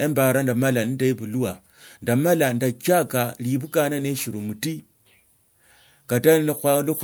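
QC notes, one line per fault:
No technical faults can be heard in the speech signal, whose level and continuity hold steady for the whole recording.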